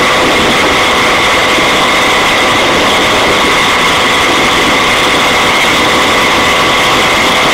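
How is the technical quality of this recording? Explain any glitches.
The recording has two brief dropouts from lost LE Audio frames. At 1.40–1.42 s about 15 ms is missing, and at 5.61–5.64 s about 22.5 ms, which fits two and three 7.5 ms frames. The LC3 decoder fills each gap by repeating the last spectrum with randomised signs, so tonal content briefly becomes a noisy smear.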